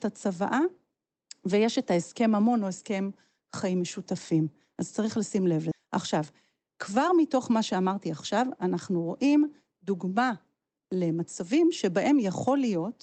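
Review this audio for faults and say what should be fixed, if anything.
Skip ahead at 5.71 to 5.73 s: a stretch of speech, roughly 0.4 s, is missing, and playback jumps straight from one side to the other with no fill. The receiver discarded audio that had piled up behind a delay, shortening the latency by about that much in one step. Keeping the jitter buffer from overflowing, for example by letting it absorb bursts gradually rather than flushing, would prevent this.

Jitter buffer speed-up from 6.58 to 7.50 s: the speech runs about 6% fast at unchanged pitch and sounds slightly hurried. The buffer was holding more than its target, so the receiver trimmed short pitch-period slices repeatedly, around 70 ms in all. Smoothing network delivery so packets don't arrive in clumps would keep the buffer near its target and avoid this.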